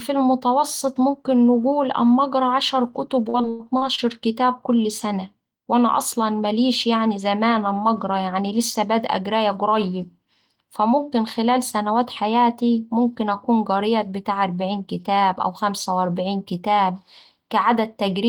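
From 3.29 to 4.04 s, after "أما أقرا عشر كتب", repeated packet loss (robotic sound) strikes. Five gaps, up to 100 ms, are patched with repeated earlier sound. It sounds choppy and robotic.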